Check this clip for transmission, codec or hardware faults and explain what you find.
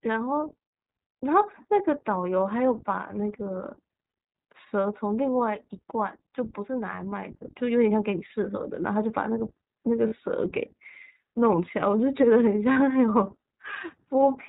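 The speech runs through an iLBC codec for its whole length, and three short packet losses are concealed by that codec.

iLBC codec, throughout: the speech is band-limited to narrowband telephone range, with nothing above 4 kHz, so sibilants and consonant edges lose their brightness. iLBC codes each frame's excitation independently, and the frame rhythm points to 20 ms frames, which fits the 15.2 kbps mode. The codec damage is plainly audible as a slightly rough, synthetic grain over the voice.

Lost iLBC frames, at 4.10 s, 10.08 s and 12.72 s: each event is roughly 40 ms, consistent with two 20 ms frames dropped in a row. The decoder covers each gap by repeating the last pitch cycle blended with noise, so the voice briefly turns into a held, faintly buzzy or breathy vowel. Because iLBC frames do not depend on earlier ones, the speech snaps back to normal almost immediately after each gap.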